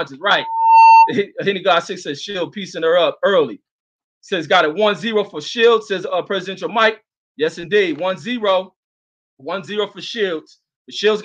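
A loudspeaker feedback squeal appears from 0.36 to 1.13 s. A single tone near 903 Hz swells over a fraction of a second to sit roughly 10 dB above the surrounding sound. A microphone was picking up its own loudspeaker, and the loop gain at that frequency exceeded one.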